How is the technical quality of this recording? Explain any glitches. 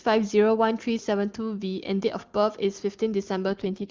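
One glitch, right at the end. From 3.48 s to the close, there's an AMR rate drop: the HD Voice speech turns rough and synthetic without losing bandwidth, which fits the codec stepping down from 23.85 to 6.6 kbit/s.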